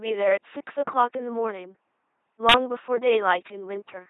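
LPC-10 vocoder damage runs through the whole speech clip. The sound has been rebuilt from a small all-pole vocal tract model excited either by a buzzing pulse train or by noise, with each moment forced wholly into one or the other. The result is a harsh, mechanical robot buzz, with stray hiss or buzz where voicing is misjudged, heavy damage consistent with a 2.4 kbit/s coder, and nothing above 3.9 kHz.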